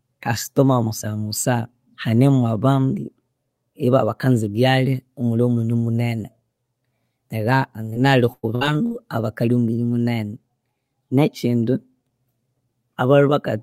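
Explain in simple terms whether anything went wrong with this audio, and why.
Short concealed packet loss at 7.93 to 7.97 s: a few hundredths of a second of speech arrived too late, so the receiver stretched the previous sound, leaving a brief smear.

Repeated packet loss (robotic sound) from 8.33 to 8.92 s: four gaps, the longest about 0.1 s, were each patched by continuing the last sound. Over a third of the stretch is patched, so the speech turns choppy.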